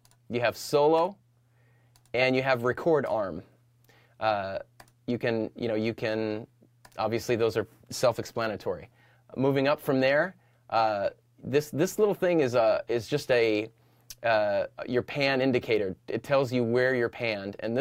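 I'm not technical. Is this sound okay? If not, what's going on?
Yes, no faults heard.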